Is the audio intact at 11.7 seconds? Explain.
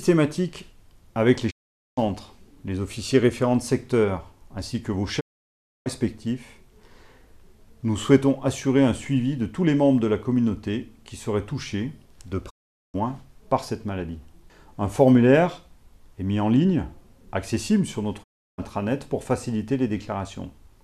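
Yes, the audio is intact at 11.7 seconds, with no dropout, click, distortion or other fault audible at that moment.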